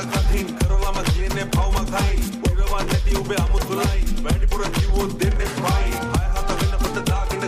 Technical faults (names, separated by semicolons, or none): none